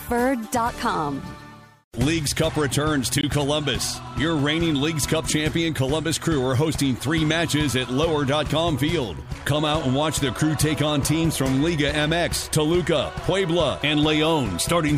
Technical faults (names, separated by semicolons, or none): block of digital silence